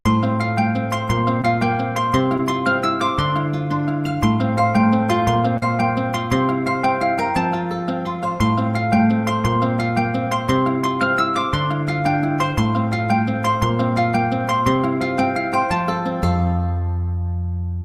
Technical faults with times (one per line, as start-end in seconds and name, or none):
1.41-1.45 short concealed packet loss
2.37-2.54 short concealed packet loss
5.57-5.63 short concealed packet loss